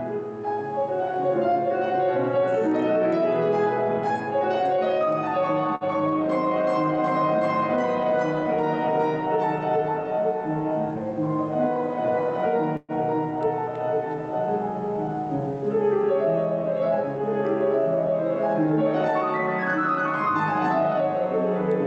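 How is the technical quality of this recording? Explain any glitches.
The recording has two timing glitches where the sound briefly freezes and then resumes. It passed through a call codec whose content stops at about 8 kHz, which fits Opus at a moderate bitrate.

At 5.75–5.84 s there is a short stall from a late packet. A packet arrived late, so the receiver stretched the last sound for about 54 ms until it came, and the rest of the audio now plays that much later. On a spectrogram this shows as a short run of repeated, smeared frames. In the waveform it appears as a held stretch, with nothing missing.

At 12.77–12.92 s there is a call audio freeze, likely caused by packets being held up in transit. The receiver filled about 120 ms by continuing the last sound as it faded, and that decay ends in about 10 ms of silence before the audio resumes where it stopped. On a spectrogram this looks like a horizontally smeared patch fading into a thin blank strip. 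In the waveform the envelope collapses toward a flat line.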